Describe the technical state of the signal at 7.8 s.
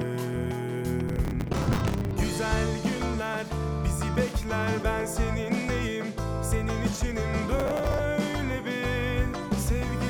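At 7.8 s the processor is falling behind: it cannot finish its small audio buffers in time, and from 7.60 to 7.99 s it misses deadline after deadline, around twenty times, with buffers of roughly 10 ms each. Each miss replays a scrap of old audio with hard edges where fresh sound should be. Stacked together, these produce processor overload crackle, a gritty, tearing burst over the sound that stops once the load eases.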